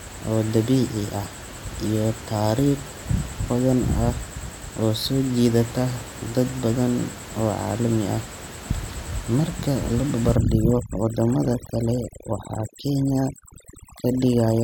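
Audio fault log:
10.36–14.64 s, overdone noise removal: from 10.36 s to the end, the room noise, which sits about 16 dB below the speech before this point, drops and breaks up into twinkling specks. The reduction is set too strong. Any frequency band close to its noise estimate is pulled far down or switched off, so isolated bands flicker in and out. Quieter parts of the speech are cut along with the noise.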